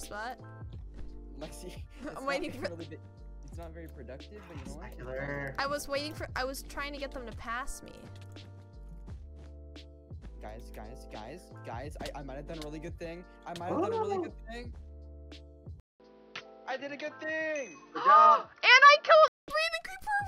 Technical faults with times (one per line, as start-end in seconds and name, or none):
15.80-19.48 input switched to a poorer device